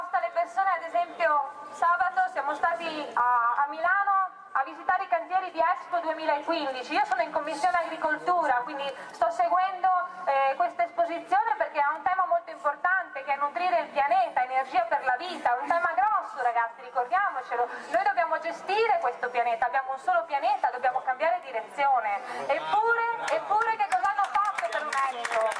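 No technical faults are audible anywhere in this audio.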